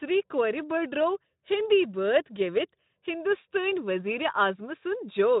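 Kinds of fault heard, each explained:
No faults are audible.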